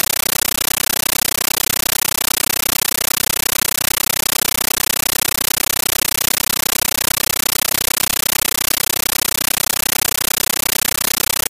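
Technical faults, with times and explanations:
Throughout, compressed stream played as audio: an undecoded bitstream, fitting AC-3, is output as samples, so loud 13.3 ms static bursts at 31.25 per second replace the sound.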